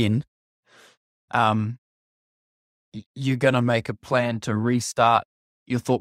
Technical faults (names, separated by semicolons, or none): none